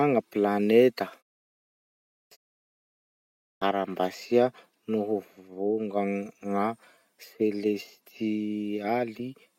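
At 1.98 s, 2.61 s and 3.32 s the speech resumes with its onset missing, a clipped start after a pause. The output path goes idle during the preceding gaps (0.84 s, 0.33 s and 0.48 s) and needs time to wake and relock, so roughly 334 ms, 348 ms and 295 ms of sound are swallowed, through 2.31 s, 2.96 s and 3.62 s. Each phrase snaps in abruptly from silence without its first sounds.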